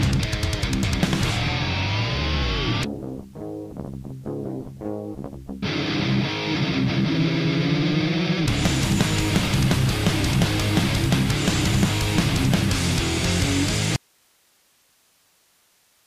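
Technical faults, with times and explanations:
13.96 s to the end: audio dropout to a faint residue. The wanted signal was likely lost while the path after the break stayed live, so the sound cuts off abruptly, not as a fade, leaving only hiss roughly 40 dB below the signal until the clip ends.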